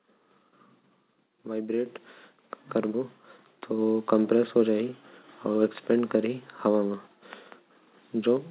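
Speech carried over a narrowband call path with nothing above 4 kHz, consistent with G.711 at 64 kbps, shows two microphone volume steps up: at 1.86 s the voice and background jump together by about 8 dB, then at 3.78 s by about 2 dB more, as automatic input-gain control raised the device level.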